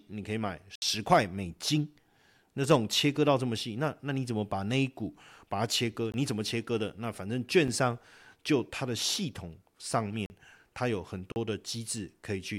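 The audio dropped out, leaving blocks of digital silence at 0.75–0.82 s (66 ms), 6.12–6.14 s, 7.68 s, 10.26–10.30 s and 11.32–11.36 s. Each one cuts out and back abruptly with no fade, heard as a tick or brief hole in the speech.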